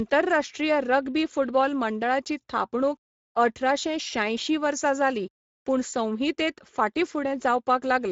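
Speech passed through the Speex codec, a CELP coder starved of excitation bits at a setting that fits roughly 17 kbps, so throughout the clip the speech is plainly damaged, sounding noisy and hoarse, with nothing above 7.6 kHz and the upper band a shaped noise-like fill.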